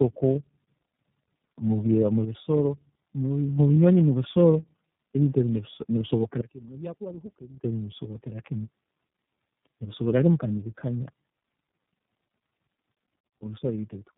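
Tandem speech coding runs through the whole speech clip: the call appears to have crossed three links with different low-rate speech codecs, each decoding and re-encoding the previous one's damaged output. The compounded losses leave rough, muffled, warbly speech, with nothing above 3.8 kHz.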